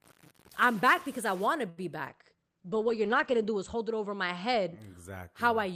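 From 0.00 to 1.47 s the speech carries distortion, with hiss filling the pauses. This is likely a stuck bit, which differs from clipping because the quiet gaps turn noisy too.

At 1.69 to 1.80 s a short stall from a late packet holds the sound for about 78 ms, then resumes from the same point. Nothing is skipped, unlike a dropout.

From 2.10 to 4.84 s a call bitrate drop from 48 to 14 kbps makes the speech rough and watery. The bandwidth narrows from 20 kHz to 8 kHz, muffling the top end, and the lowest rate lasts about 1.4 s.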